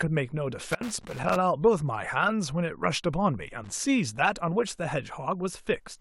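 Speech, with two bursts of loose connector crackle: an irregular scratchy run from 0.72 to 1.36 s and a short one from 3.64 to 3.72 s. That's a worn or dirty contact chopping the signal as it shifts.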